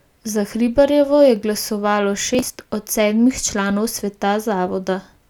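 After "je glasovalo", from 2.35 to 2.66 s, processor overload crackle tears through the speech. Roughly twenty buffers of around 10 ms miss their deadline and are skipped, leaving hard-edged gaps heard as gritty crackle. The waveform shows abrupt flat dropouts, and the spectrogram shows dense vertical broadband streaks.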